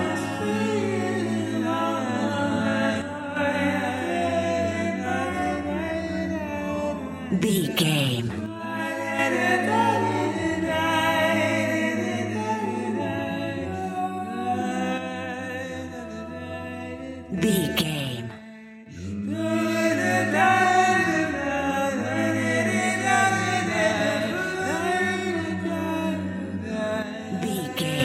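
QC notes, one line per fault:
3.02–3.37 s, 8.46–9.19 s, 14.98–17.38 s, 17.81–18.86 s and 27.02–28.00 s, one channel drops out: the sound abruptly falls by about 6 dB and recovers just as sharply at each end, with no fade. The likely cause is one stereo channel going silent. Once the two channels are summed to mono, material common to both loses half its contribution, and anything carried only in the missing side vanishes for those stretches.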